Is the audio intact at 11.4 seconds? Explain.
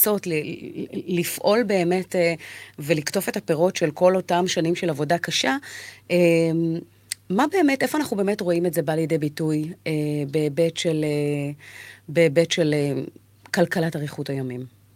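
Yes, at 11.4 seconds the speech plays through intact, with no dropout, click, distortion or other fault at that moment.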